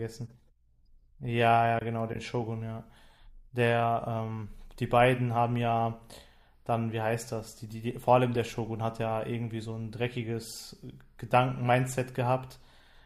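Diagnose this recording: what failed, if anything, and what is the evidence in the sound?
The codec stage failed. At 8.35 to 8.37 s, a corrupt frame decoded as a brief error, with a much fainter one at 9.49 s. Flipped bits in a couple of frames put energy at wrong frequencies, visible on a spectrogram as brief vertical smears unrelated to the speech harmonics.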